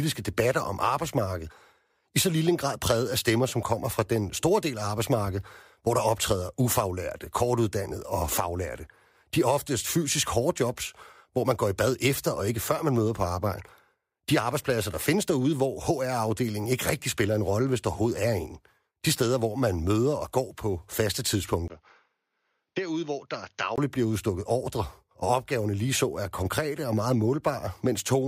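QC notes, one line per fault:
21.68–23.78 s, input switched to a poorer device: after "og går på faste" a 20 ms gap, then the speech turns dull and boxy, with nothing above 6.7 kHz, roughly 5 dB quieter, over a faint new noise floor. Likely a narrower-band microphone took over until "bliver udstukket ordre og".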